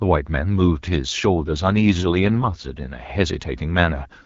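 From 1.36 s to 2.68 s the speech turns noticeably rougher, buzzier and more synthetic, then returns to the lightly coded AMR-WB quality heard around it. This is an AMR rate drop: the codec switched to a lower mode, which sounds consistent with a step from 12.65 down to around 6.6 kbit/s. The bandwidth stays just as wide and nothing drops out, unlike packet loss or a fallback to narrowband.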